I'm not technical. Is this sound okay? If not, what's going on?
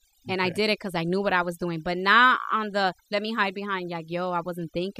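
No. Overdone noise removal runs through the whole clip. A noise-cleaning tool was set too strong, so it shuts off frequency bands it mistakes for noise, including quieter parts of the speech. The background drops and breaks up into twinkling specks.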